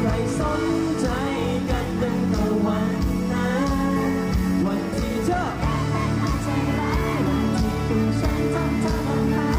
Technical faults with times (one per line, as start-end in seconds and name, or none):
none